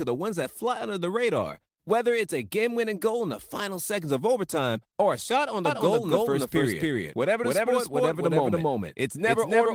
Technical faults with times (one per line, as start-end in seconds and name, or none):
5.65-9.74 doubled audio track